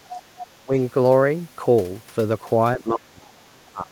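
From 0.0 to 0.24 s the speech is suppressed in double talk. The level sinks by about 10 dB, and the waveform envelope visibly pinches. The likely cause is an echo canceller that could not tell the near talker from loudspeaker echo while both sides spoke, so it turned everything down.

Overlapping this, from 0.09 to 0.47 s, the other side's voice leaks through. A second, fainter voice sits about 15 dB under the speech. It is likely residual loudspeaker signal the canceller failed to subtract from the microphone, and on a spectrogram it shows as a weaker set of harmonics interleaved with the main ones.

Suppression returns from 0.63 to 0.74 s as a brief dip of about 15 dB. It comes back hardest from 2.77 s to the end at 3.91 s, where the speech falls by up to about 30 dB for roughly a second. The waveform collapses to a thin trace there, and the spectrogram darkens across the band.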